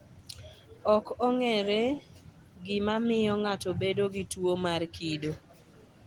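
Nothing is technically wrong with this speech clip, which has passed through Opus voice compression working as intended.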